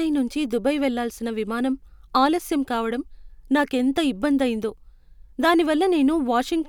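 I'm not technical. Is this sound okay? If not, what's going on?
Yes, no faults to hear.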